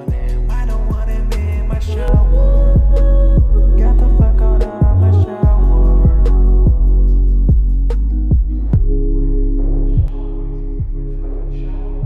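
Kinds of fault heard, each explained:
De-emphasis applied wrongly: from 2.08 s to 10.08 s the sound turns dull and muffled, as if a blanket had been thrown over it, with the top end rolling away smoothly rather than cutting off at a sharp edge. By 10 kHz the level sits about 11 dB below that at 1 kHz. The cause is a treble-cut curve, intended to reverse a high-frequency boost, landing on audio that never received that boost, or being applied a second time.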